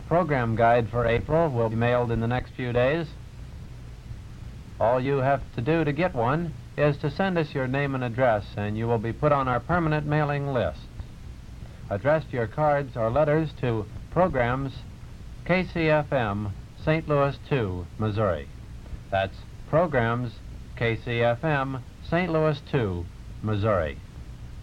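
Compressed frames skipped: at 1.71–1.74 s, 5.05 s, 9.53 s, 13.69 s and 22.27–22.31 s, whole blocks of the compressed stream were never decoded, whether missing or rejected as damaged. The audio lurches forward by roughly 100 ms at the first point, about 70 ms at 13.69 s, and about 20 ms at the others, which fits a frame length of 20 ms.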